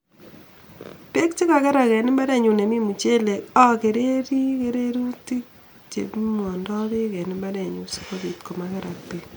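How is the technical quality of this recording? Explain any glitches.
No glitches turn up anywhere in this speech recording, and the signal holds together without any dropouts, clicks or other technical breaks.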